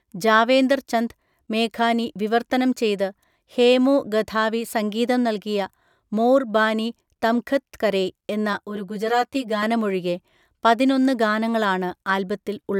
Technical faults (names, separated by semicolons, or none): channel delay (comb filtering)